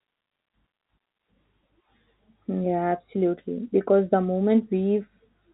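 Nothing is technically wrong with this speech clip. It carries the narrow sound of G.711 telephone coding, with nothing above about 3.8 kHz.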